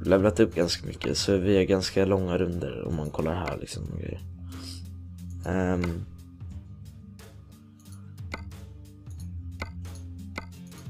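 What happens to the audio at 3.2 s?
At 3.2 s the sound carries sample clock jitter, which runs through the whole clip rather than starting or stopping there. The converter's clock wanders by around two microseconds, so each sample lands slightly off its intended instant. The timing error turns into an amplitude error wherever the waveform changes quickly, giving a hiss and roughness roughly 35 dB below the signal. It is strongest on loud, bright passages and disappears in quiet gaps.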